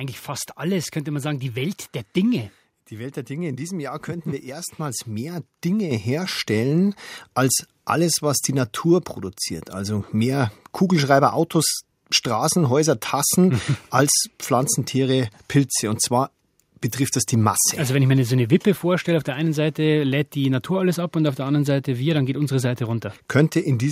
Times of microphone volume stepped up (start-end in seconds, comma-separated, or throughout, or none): 5.91